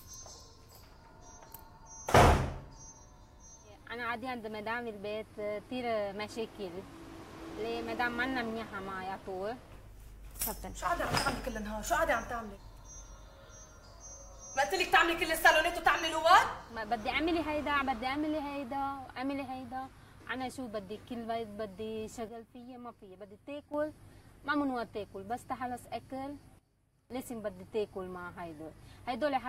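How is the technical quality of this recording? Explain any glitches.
There are two sudden gain jumps. From 22.29 to 23.74 s the level drops abruptly by about 9 dB, and from 26.59 to 27.10 s it drops by about 16 dB, snapping back each time. The sound and the background noise fall and recover together, instantly rather than fading. The likely cause is a digital gain change applied from one sample to the next with no ramp, such as a level setting or bit shift switched in and out.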